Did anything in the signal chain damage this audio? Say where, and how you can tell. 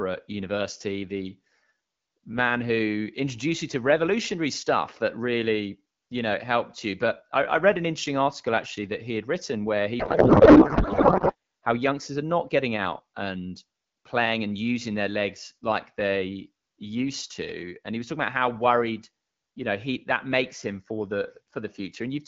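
Yes. The damage sits at the codec stage, as a codec payload misread. From 9.99 to 11.35 s, between "had written where he" and "how youngsters are not", the speech gives way to garbled noise and warble that barely tracks it. The decoder is pulling fields from the wrong bit positions, which fits octet-aligned AMR being read as bandwidth-efficient. The AMR wideband stream at 12.65 kbit/s is clear on either side, so the packing mismatch is the cause.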